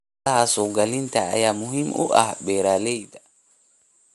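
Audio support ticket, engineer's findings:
Throughout the speech: breathy, grainy top end, band empty above 11.6 kHz. Likely Bluetooth LC3 compression at around 48 kbps, 10 ms frames; upper spectrum quantised away and partly noise-filled, giving plainly audible codec damage.

2.76–3.28 s, after "ayaa muhiim u ah": zipper noise, ticking during a level drop of roughly 20 dB. Gain applied in unsmoothed 2 dB steps, around 30 per second, each step clicking.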